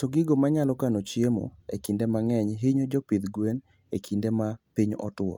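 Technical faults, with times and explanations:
No technical faults can be heard in this speech.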